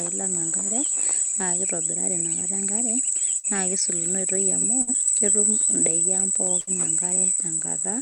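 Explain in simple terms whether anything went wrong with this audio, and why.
A burst of packet loss happens three times in this speech, at about 3.37 to 3.47 s, 4.82 to 4.90 s and 6.61 to 6.70 s. Each time, a short run of sound failed to arrive in time. The receiver stretched the last bit it had for about 55 to 60 ms, fading it into a brief buzz or hiss, and then skipped ahead. About 60 ms of speech is simply gone at each spot.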